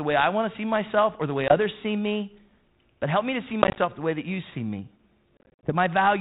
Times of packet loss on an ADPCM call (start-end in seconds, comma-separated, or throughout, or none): 1.48-1.56, 3.62-3.79, 5.37-5.72